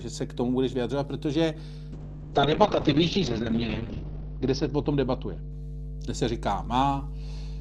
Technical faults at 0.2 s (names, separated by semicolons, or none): mains hum